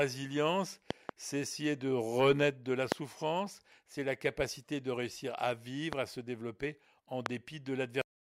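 Loud pops interrupt the speech at 0.91–1.11 s (a double pop), 2.92–2.94 s after "de renaître de la", 5.93–5.95 s, and 7.26–7.28 s after "à se développer en". The pops are sharp thumps far louder than the speech, which continues underneath, and were likely caused by electrical transients such as switching or static.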